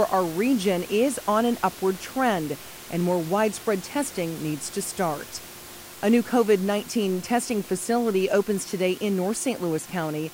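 No technical faults in the speech; the room noise is part of the recording and sits about 18 dB below the voice.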